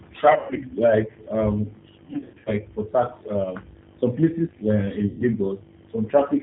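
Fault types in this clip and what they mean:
G.729 codec: The speech was carried by an 8 kbit/s G.729 coder that rebuilds each 10 ms frame from a vocal tract filter, a pitch predictor and a few pulses, discarding everything above 4 kHz. Here the damage is plainly audible through the whole clip. The speech sounds band-limited and dull, with a rough, slightly synthetic grain where the model only approximates the original.
VoIP packet loss concealed by the speech codec: Packets went missing and the decoder covered each gap by extending its last pitch and filter settings at falling gain. This happens three times, at about 0.32 to 0.61 s, 2.06 to 2.51 s and 5.07 to 5.24 s. The speech smears into a buzzy tone or coloured noise that fades. The first two are scattered dropouts with gaps up to about 0.12 s, and the voice stays weak or distorted briefly after each.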